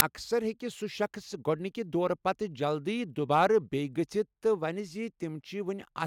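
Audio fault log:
0.00 s, file tags played as audio: a 6 ms burst of very loud white noise opens the clip with hard edges, just before "اَکثَر ہٮ۪کہِ". An embedded cover picture was read as samples. Its compressed bytes look random, so they play as static.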